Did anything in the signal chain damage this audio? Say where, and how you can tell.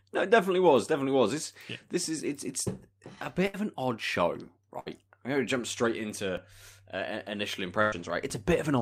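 Yes. Bursts of packet loss on the network leg at 3.47 to 3.56 s, 4.80 to 4.88 s and 7.82 to 7.94 s. At each, the receiver stretches and fades the last speech sound for about 60, 60 and 100 ms, then jumps ahead, so that much speech is gone.

DC steps at 6.37 s and 8.30 s point to the converter, where the zero line of the waveform suddenly shifts. Each step is a low thump under unchanged speech, and the offset then drains away, which fits a high-pass filter at about 5 Hz.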